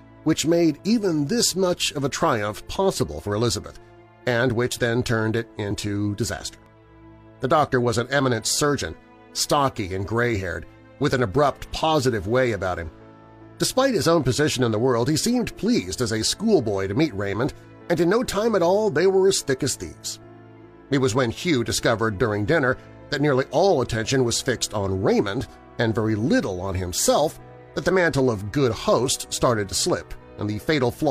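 Tiny skips break the sound at 0.79 s, 1.74 to 1.78 s, 3.75 to 3.79 s, 4.72 s and 6.66 to 6.70 s. This is overlap between stream segments: adjacent 1-second segments claim overlapping time, so the player discards 18 to 44 ms of real audio and the waveform jumps.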